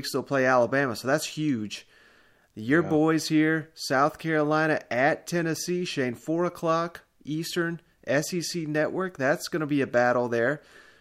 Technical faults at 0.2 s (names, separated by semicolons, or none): none